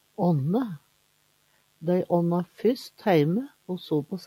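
From the very start and for the whole clip, a mains buzz sits under the sound, roughly 30 dB below it. It is a raspy buzz rather than a smooth hum. Switching spikes from a dimmer, rectifier or unshielded lead repeat twice per 50 Hz cycle, so the energy spreads into harmonics reaching several kilohertz. A clean 50 Hz hum would stay low and rounded. This one stays the same level throughout and doesn't follow the sound.

Between 0.79 and 1.81 s, the sound is cut by the noise suppressor for around 0.7 s in total, dropping by up to 12 dB at the deepest point. The processor mistook parts of the wanted sound for noise and pulled them down. Sustained and decaying parts sink or have their tails clipped short, while sharp onsets still come through. That selectivity separates it from a plain level dip or dropout, which would affect everything equally.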